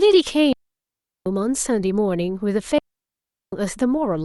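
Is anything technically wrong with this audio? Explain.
Yes. At 0.53 to 1.26 s and again at 2.78 to 3.53 s, the speech drops into clean near-silence for about 0.74 s each time, with no noise burst at either edge. This is a digital wireless dropout: the receiver lost too much data and muted with a very short fade.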